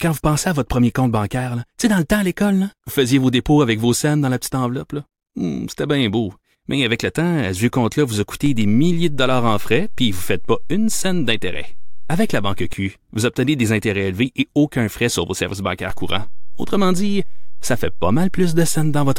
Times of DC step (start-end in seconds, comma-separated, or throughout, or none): 8.46-12.73, 15.90-19.19